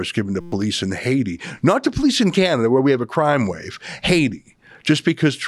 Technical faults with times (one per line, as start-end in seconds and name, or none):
0.41-0.52 system hang loop